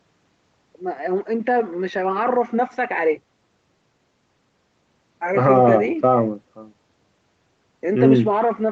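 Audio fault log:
No faults logged; the speech has passed through call microphone processing and an Opus call path, with nothing above 8 kHz as expected for that codec setting.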